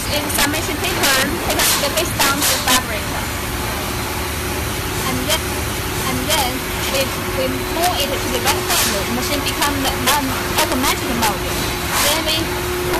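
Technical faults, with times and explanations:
Throughout: integer overflow. The signal is driven about 9 dB past the integer limit, and around one percent of samples wrap to the opposite extreme instead of holding at full scale, so loud peaks become violent cracks, far harsher than the flattened buzz of clipping.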